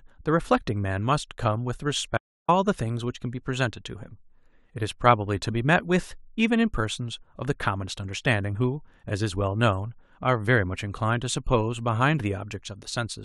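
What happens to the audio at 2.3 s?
At 2.3 s the speech cuts out in an audio dropout to silence running from 2.18 to 2.48 s, roughly 0.31 s of nothing at all. The gap is silent with no room tone, so the likely cause is a brief loss of the input while the recorder kept writing silence. On the waveform this shows as a flat line; on a spectrogram, a clean blank vertical band across every frequency, with abrupt edges.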